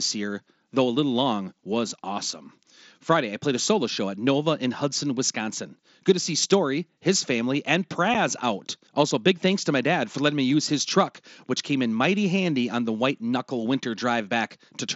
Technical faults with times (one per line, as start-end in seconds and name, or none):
8.14 unconcealed Bluetooth headset packet loss